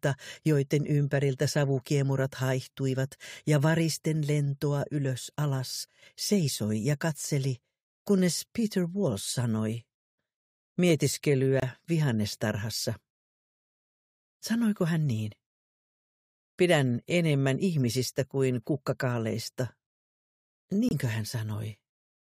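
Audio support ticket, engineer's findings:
Abrupt dropouts to dead silence, no fade in or out, timing intact afterward. First at 11.60 s, lasting 78 ms; second at 20.89 s, 40 ms, roughly three and two frame lengths. Probable component: decoder/player concealment path. Mechanism: corrupt frame muted. Bit errors in the compressed stream made the decoder reject those frames, and the player substituted silence for each rejected frame.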